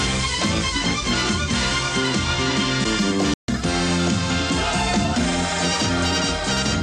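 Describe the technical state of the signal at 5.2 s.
At 5.2 s the signal is intact, with no dropout, clipping, glitch or other technical fault audible at that point.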